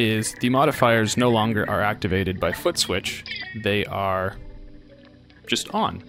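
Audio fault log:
No faults heard anywhere in this audio.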